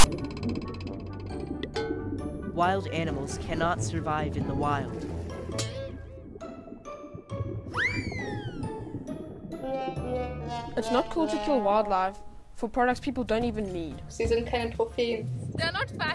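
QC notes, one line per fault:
0.00–0.04 s, file tags played as audio: a 40 ms burst of harsh rasp opens the clip, where a block of text tags was read as samples. On the waveform it shows as a hard-edged block offset from zero, and on the spectrogram as a broadband smear.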